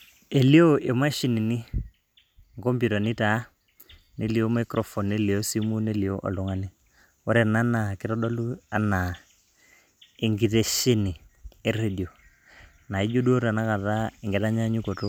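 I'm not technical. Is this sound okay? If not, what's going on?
Yes, this speech recording is okay. Nothing in it points to a technical problem that needs fixing.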